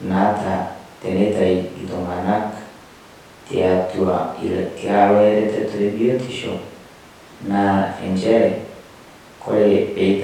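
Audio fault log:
No faults heard.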